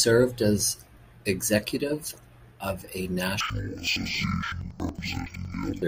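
Interleaved audio read as planar begins at 3.41 s, right after "as executive of a", and runs to the end. Each 93 ms block's alternating left-right samples get split into halves, so the speech drops an octave, sounds doubled and chops at about 10.8 Hz.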